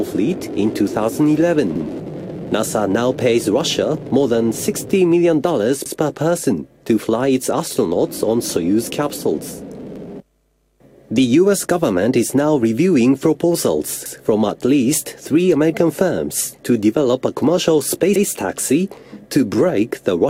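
The audio was handled in overlapping chunks of about 4 s. Each new chunk began 100 ms before the previous one ended, so that 100 ms of sound plays twice at every join. The repeats fall at 1.76–1.86 s, 5.86–5.96 s, 9.96–10.06 s, 14.06–14.16 s and 18.16–18.26 s, about 4.1 s apart. Each is heard as a click or a brief stutter recurring at that steady interval.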